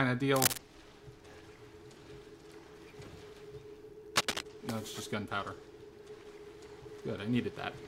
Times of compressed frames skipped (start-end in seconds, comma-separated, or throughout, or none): none